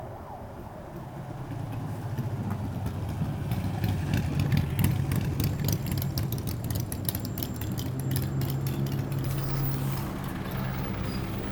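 From 4.82 to 10.16 s, a copy of the sound about 5 dB quieter trails about a second behind, cutting in and out abruptly: a doubled audio track, likely from a second, slower capture path.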